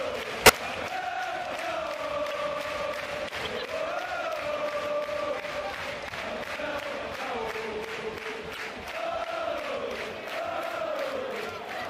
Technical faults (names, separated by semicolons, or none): corrupt frame decoded